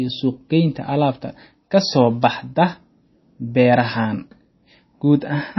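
MP3 compression, throughout: nothing above 5.8 kHz survives, and the speech sounds watery and swirly, likely from an encoder starved of bits, consistent with about 24 kbps.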